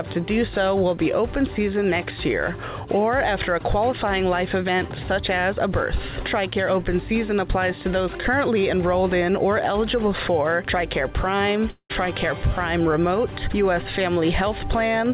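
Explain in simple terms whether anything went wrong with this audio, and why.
Around 11.7 s the sound smears into a fading buzz, then goes briefly silent before returning at 11.91 s with a piece missing. This is likely a long network dropout on the call.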